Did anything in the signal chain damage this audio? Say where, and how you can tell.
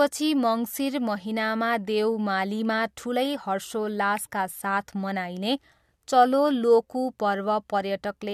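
No, nothing in the chain audibly damages this speech.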